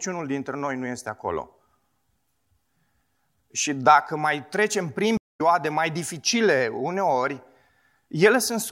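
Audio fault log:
5.17–5.41 s, stream reconnect: right after "dacă mai trecem prin" the speech drops into about 196 ms of dead silence, then picks up at "mai dificile uneori" with roughly a fifth of a second of speech simply missing, as though the talker skipped ahead. The connection broke, the player sat silent while it rejoined the live stream at a later point, and a fresh decoder started mid-stream, so the material that passed during the outage was never received.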